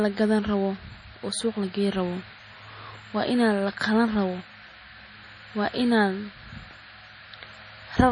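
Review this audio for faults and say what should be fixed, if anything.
MP3 compression, likely run at a starved bitrate, affects the speech throughout. The encoder cuts everything above 10.4 kHz and switches weak frequency lines on and off from frame to frame, giving a dull, watery, swirling texture. The heavy damage fits a bitrate near 32 kbps. To prevent it, encode at a much higher bitrate or keep a lossless master.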